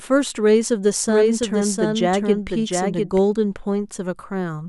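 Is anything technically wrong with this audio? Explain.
Yes. From 1.09 to 3.19 s a second, somewhat quieter copy of the speech trails about 0.7 s behind the original, dry and full-band, switching on and off abruptly. This doubled audio track is likely from a slower second capture path or misaligned edit.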